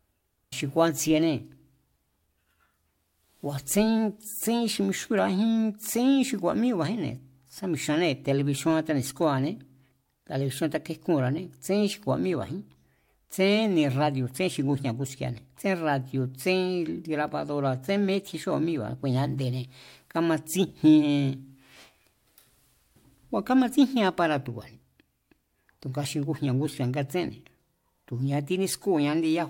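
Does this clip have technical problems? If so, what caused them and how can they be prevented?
Yes. Damaged data in a compressed stream at 0.49 to 0.53 s: corrupted bytes make the decoder misread frames and resynchronise, producing a brief glitch. Prevent it with checksummed, error-protected transfer and storage.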